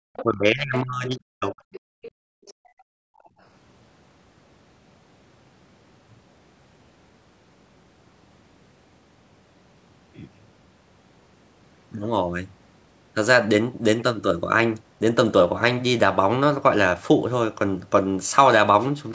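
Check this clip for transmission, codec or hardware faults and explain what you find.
The clip shows echo-canceller faults in its first few seconds: residual far-end speech, speech suppressed during double talk, and gated background.

Other side's voice leaking through, at 0.14–0.23, 1.72–1.80, 2.02–2.11 and 2.46–2.54 s: brief scraps of a second voice sit roughly 15 to 30 dB below the talker. Loudspeaker echo likely escaped cancellation.

Speech suppressed in double talk, 0.23–1.60 s: the talker's voice dips and chops, falling by around 40 dB at worst, likely because the canceller turned everything down while both sides spoke.

Background gated by the echo canceller, 1.88–3.39 s: the room sound drops by about 38 dB, clamped while the loudspeaker played, then returns when the canceller releases. The call's microphone processing leaves nothing above 8 kHz.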